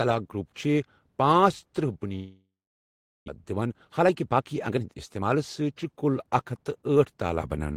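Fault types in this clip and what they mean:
Long network dropout: From 2.15 to 3.3 s the sound breaks off, most likely because packets stopped arriving for over a second. The receiver stretches the last sound into a fading buzz, and about 0.75 s of that gap is plain silence. When the speech returns at 3.3 s, roughly 0.6 s of it has simply gone missing, and the playback delay has grown by about half a second.
Jitter buffer speed-up: From 3.52 to 6.97 s the speech runs at about 114% of normal speed, yet its pitch stays unchanged. After the dropout the receiver held more buffered audio than it aims for, so it kept cutting out tiny slices one or a few pitch periods long. Together these cuts remove about half a second, and the speech sounds noticeably hurried.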